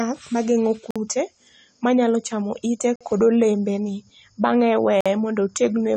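Likely AAC compression runs throughout the speech: nothing sounds above 9.1 kHz, and sibilants turn dull, smeared and fizzy, damage consistent with a bitrate around 32 kbps. Gaps between chunks occur at 0.91–0.96 s, 2.96–3.01 s and 5.01–5.06 s. Each is a 50 ms silence, recurring every 2 s where consecutive chunks were joined with dead air between them.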